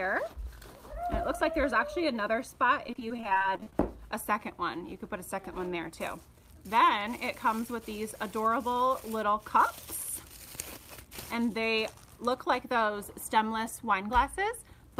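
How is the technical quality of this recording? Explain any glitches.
The recording has one glitch. From 2.87 to 3.73 s there is repeated packet loss (robotic sound): a rapid string of short holes, none longer than about 24 ms, each patched by stretching the preceding sound. Roughly a quarter of that stretch is concealment, giving a choppy stutter. Unlike a single dropout, the gaps recur in quick succession.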